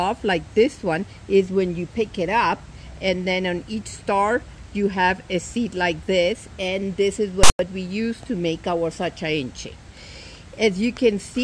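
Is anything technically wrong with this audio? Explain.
Yes. From 7.43 s to 7.59 s there is a case of file tags played as audio. A block of text metadata was decoded as sample values, so the bytes of the characters became a loud, harsh rasp sitting off-centre from zero, with a hard start. The zero padding decodes as silence. The result is a sudden burst of static with hard edges, about 0.16 s long.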